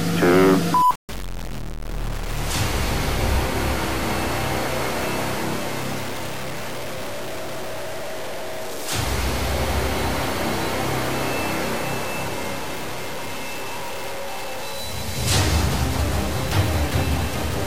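Low bit depth without dither runs throughout: grainy distortion tracks the sound, roughly 10 dB below it, likely from truncation to about 5 bits with no dither.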